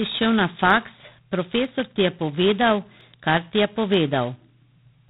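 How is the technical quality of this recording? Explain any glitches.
The quality is poor, with heavy codec damage throughout and four isolated clicks.

The speech has passed through G.726 ADPCM at 16 kbit/s, which spends only two bits per sample on the difference from its predicted value. That coarse coding leaves a harsh, rasping hiss riding on the speech's level, and nothing above 4 kHz survives.

Four sharp clicks come at 0.70 s, just after "šel na", at 1.65 s, at 3.01 s, and at 3.94 s, just after "ti je". Each is likely dropped samples, with a couple of samples missing so the waveform jumps abruptly to a later value, producing a single brief tick.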